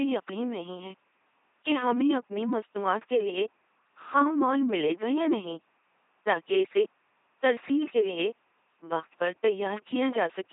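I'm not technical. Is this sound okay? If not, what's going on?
No. From start to finish the speech sounds buzzing and robotic, with odd bursts of buzz or hiss, and everything above about 3.8 kHz is missing, so it sounds dull. This is heavy damage from an LPC-10 vocoder, a very low-quality military voice codec. Instead of sending the actual voice, it sends a rough description and rebuilds each moment from either a buzz or a hiss. The faint room noise is just the recording space.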